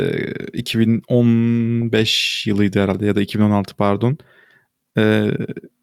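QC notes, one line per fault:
Nothing to flag here; the speech runs along without any technical trouble I can hear.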